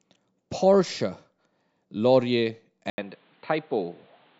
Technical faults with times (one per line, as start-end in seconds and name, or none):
2.90-4.40 input switched to a poorer device